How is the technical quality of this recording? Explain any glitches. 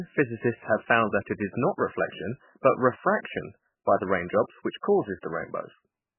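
Poor: the speech is dull, watery and swirly throughout, with nothing above 3 kHz. The likely cause is heavy MP3 compression at a starved bitrate, consistent with about 8 kbps. Short of bits, the encoder cuts the treble and drops weak frequency lines, which flicker frame to frame and blur consonant attacks.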